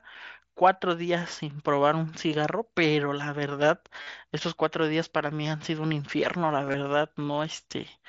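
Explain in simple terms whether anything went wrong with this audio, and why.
Concealed Bluetooth headset packet loss occurs at 4.02 to 4.07 s and again at 6.65 to 6.74 s. Bits of sound between headset and phone went missing, and the phone filled each gap by repeating a recent stretch of sound, leaving brief buzzy patches.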